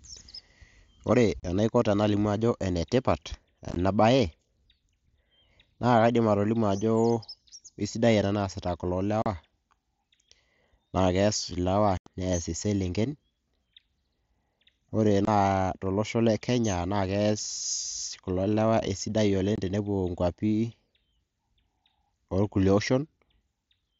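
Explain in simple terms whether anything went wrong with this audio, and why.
Unconcealed Bluetooth headset packet loss happened: small chunks of sound sent wirelessly between the headset and the phone never arrived, and nothing was done to cover the gaps, so silence took their place. You hear brief holes with sharp edges at 1.40 to 1.43 s, 3.69 to 3.76 s (several tiny gaps close together, sounding choppy), 9.22 to 9.26 s, 11.97 to 12.07 s (the longest, about a tenth of a second), 15.25 to 15.28 s and 19.56 to 19.58 s.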